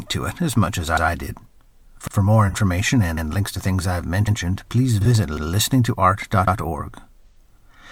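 Right from the start there's a steady stutter from overlapping chunks. The audio has been cut into 1-second blocks, and each new block begins 100 ms before the last one finished, so that slice plays twice at each join. The first comes just after "it as much as" at 0.97 s, then 2.07 s and 3.17 s, the latter just before "links to things I've". Another lands right after that same phrase at 4.27 s, followed by 5.37 s and 6.47 s. That gives a regular once-a-second hiccup you can almost tap along to.

Mixed in are three bursts of AAC frame loss with concealment, at 2.49 s, 5.01 s and 7.26 s. At each one the decoder patched a gap by rebuilding sound from the last good spectrum, which leaves a brief smeared, noisy or phasey blur instead of clean audio. The first two last about 43 ms each, which fits a single dropped frame. The one at 7.26 s runs about 85 ms, roughly two frames' worth, so that smudge is longer.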